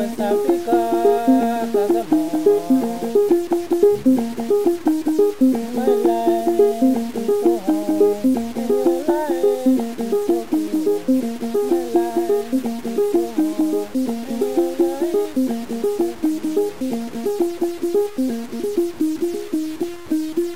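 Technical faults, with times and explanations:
Throughout, low bit depth without dither: a grainy, rough distortion rides on the sound and changes with it, sitting roughly 25 dB below the signal, while quiet stretches turn gritty or sputter and drop out. This is likely truncation to about 6 bits with no dither. Unlike steady hiss from a dithered low-resolution signal, this error follows the waveform, so it vanishes in silence and grows harsh on soft, decaying sound.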